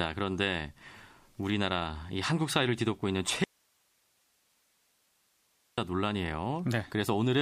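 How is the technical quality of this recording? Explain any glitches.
One clear glitch. An audio dropout to a faint residue runs from 3.44 to 5.78 s. The signal likely broke while the path stayed live, leaving only hiss, about 40 dB down, for 2.34 s.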